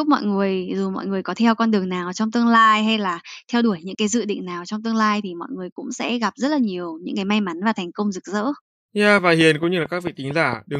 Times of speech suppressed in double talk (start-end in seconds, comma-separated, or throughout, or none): none